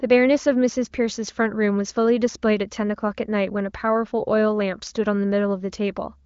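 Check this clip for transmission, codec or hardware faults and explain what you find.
No faults found: the speech carries the narrow top end of an AMR wideband (HD Voice) link, with nothing above about 7.2 kHz, and its clarity fits a rate near the codec's highest, around 23 kbit/s.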